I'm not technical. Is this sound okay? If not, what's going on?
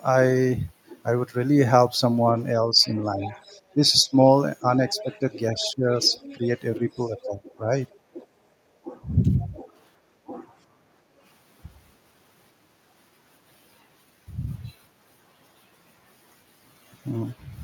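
No. From 2.67 to 8.21 s, 8.85 to 9.64 s and 10.27 to 10.39 s, the speech keeps dipping and thinning. This is speech suppressed in double talk, likely because both sides talked at once and the echo canceller turned everything down.

The other side's voice leaking through can be heard faintly from 2.81 to 4.03 s, 4.89 to 7.28 s, 9.2 to 9.48 s, and in a tiny scrap near 7.9 s. It is likely their loudspeaker sound reaching this microphone.

From 8.52 to 8.57 s, the room sound briefly drops. This is background gated by the echo canceller, which turns the microphone down while the loudspeaker plays.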